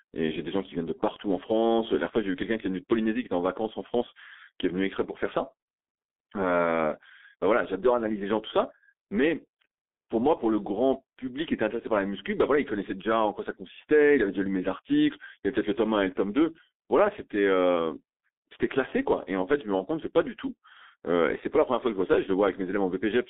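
Throughout, G.723.1 codec damage is heavy. The audio is narrowband, about 250 Hz to 3.6 kHz, with coarse frames that fit roughly 6 kbit/s. It sounds muffled, hoarse and smeared, and a spectrogram shows nothing above 3.6 kHz.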